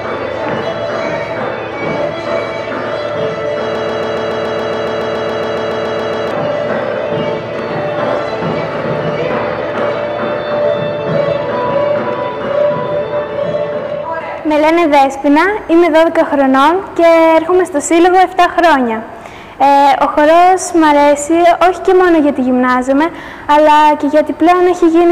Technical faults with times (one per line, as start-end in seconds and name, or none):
3.75-6.31 broken-record loop